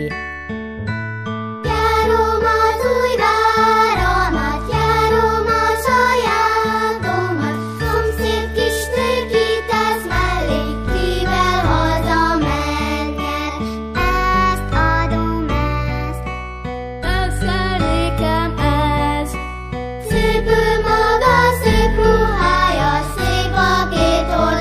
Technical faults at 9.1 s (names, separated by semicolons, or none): none